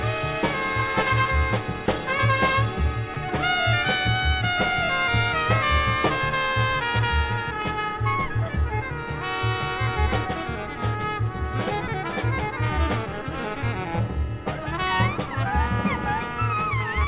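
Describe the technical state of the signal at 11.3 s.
At 11.3 s the signal is intact, with no dropout, glitch or distortion, only the steady narrow-band character of the call path, with nothing above 4 kHz.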